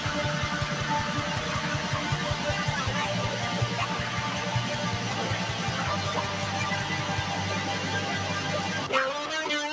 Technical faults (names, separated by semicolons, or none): none